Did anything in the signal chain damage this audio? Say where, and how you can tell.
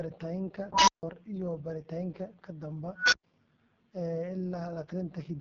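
Yes. The AMR wideband (HD Voice) codec damaged the speech for the whole clip, at the codec stage. The speech sounds rough and raspy, and nothing reaches above about 7.1 kHz. That roughness points to AMR-WB's lowest mode, around 6.6 kbit/s. At that rate the pulse-excited vocal tract model gets too few bits to follow the voice accurately, so the speech comes out harsh. The top band, above about 6.4 kHz, is only synthetic noise shaped to fill the gap.

An unstable filter in the processing chain fails twice. The first failure runs from 0.72 to 1.03 s, just before "iyo baaritaanka ka". A tone of around 1 kHz swells over about 0.15 s and clips. The output then drops to silence for about 0.15 s. The second failure runs from 2.96 to 3.23 s, right after "iyo baaritaanka ka". Here a tone of around 1.5 kHz builds over about 0.16 s, followed by about 0.11 s of silence. In both cases a recursive filter's feedback grew without limit until its arithmetic overflowed, and the output stayed muted until the filter reset.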